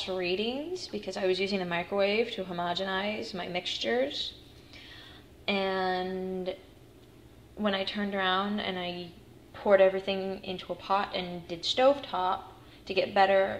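No technical faults can be heard anywhere in the signal.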